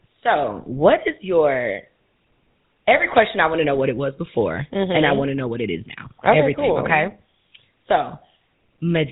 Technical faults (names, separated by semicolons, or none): GSM full-rate codec